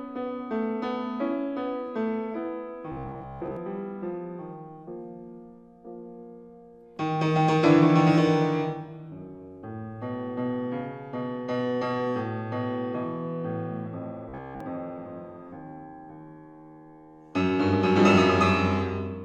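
Audio likely arrived too seldom, so the last 15 ms was replayed, giving robotic sound from repeated short buffers: a rigid 66.7 Hz buzz, mostly at 2.92–3.57 s, entirely at 14.29–14.60 s.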